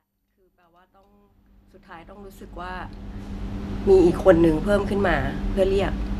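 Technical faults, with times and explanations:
No technical faults can be heard in this speech clip. The level rises in a smooth, gradual fade-in from the very start, reaching full level at about 3.72 s with no click or hard edge.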